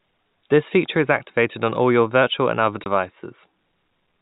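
At 2.84 s, right after "your virtual and other", the speech drops out in a brief packet loss filled with silence. A block of about 20 ms, which fits a single lost 20 ms packet, never reached the receiver, and the player inserted digital silence in its place. The gap starts and ends abruptly, so the waveform jumps to and from silence at each edge of the hole. The surrounding audio carries the 4 kHz band limit of the G.711 telephone path.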